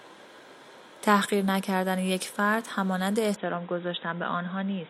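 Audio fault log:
3.36 to 4.90 s, input switched to a poorer device: at 3.36 s the speech abruptly turns dull and boxy and stays that way to the end, with nothing left above 3.8 kHz. The change comes with no gap and no obvious jump in loudness, only a faint new background noise far beneath the speech. The likely cause is the system moving its input mid-recording to a narrower-band microphone or headset call profile, whose own band limit and tone replace the original device's.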